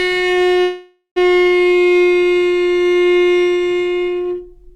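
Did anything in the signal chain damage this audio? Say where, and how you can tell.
Yes. Network call audio freeze, 0.61 to 1.18 s. Sound smears into a fading buzz, then silence. Delayed packets likely emptied the jitter buffer; nothing lost.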